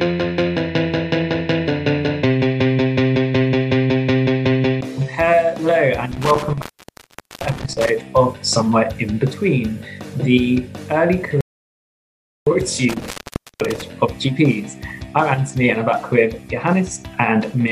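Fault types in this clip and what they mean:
Intermittent contact: Twice the sound breaks off with a crackle at the edges of the gap and returns after a moment. Between about 6.1 and 7.9 s the line is open for roughly 0.79 s, and between 12.9 and 13.8 s for about 0.51 s. While the line is open faint hiss remains. The cause is a loose plug or cable connection that briefly loses contact and then reseats itself.
Audio dropout to silence: From about 11.41 s the sound stops abruptly and returns at 12.47 s, leaving a gap of about 1.06 s. The gap is silent, with no hiss or room tone, and the sound comes back in mid-flow. Whatever played in that second is lost. The likely cause is that the input signal dropped out, through a device or link failure or a brief mute, while the recorder kept writing silence.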